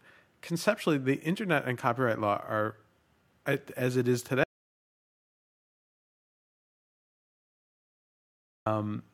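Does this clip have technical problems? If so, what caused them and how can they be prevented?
Yes. There is an audio dropout to silence from 4.44 s to 8.66 s, just after the speaker says "as it is". The speech stops mid-flow. About 4.2 seconds of silence follow, with no room tone at all. What was said in that gap is lost. The likely cause is a lost input, such as a disconnected microphone, a failed link or an accidental mute, while the recorder kept writing silence. Secure cables and connections, and monitor the input level during recording.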